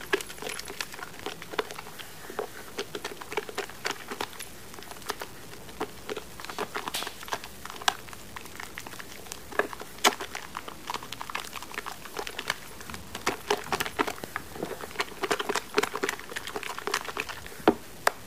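A gritty, grainy distortion rides on the sound throughout, moving with it so quiet passages turn rough and sputter. This is low bit depth without dither, likely truncation to about 7 bits, leaving a rounding error not far below the signal. Sharp loud pops punch through at 1.23 to 1.25 s, as a double pop from 6.95 to 7.05 s, and at 14.24 to 14.26 s, peaking roughly 15 to 20 dB above the sound, which carries on beneath them; likely electrical spikes from a switch, plug or driver glitch.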